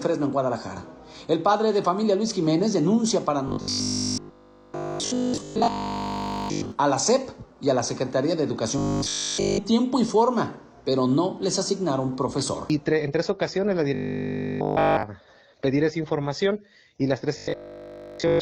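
The audio turns into a robotic sound from repeated short buffers four times: 3.48 to 6.72 s, 8.78 to 9.58 s, 13.95 to 15.03 s, and 17.38 to 18.42 s. Each stretch becomes a rigid, metallic buzz at 50 Hz. Essentially nothing new comes through. The likely cause is a playback path starved of data, looping the last 20 ms chunk over and over. That repeat period fixes the buzz pitch.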